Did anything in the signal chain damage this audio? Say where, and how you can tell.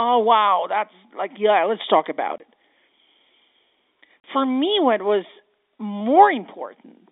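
Yes. Two silent holes at 2.38 to 2.40 s and 4.22 to 4.24 s point to network packet loss filled with silence. The 20 ms and 40 ms gaps fit one and two lost 20 ms packets.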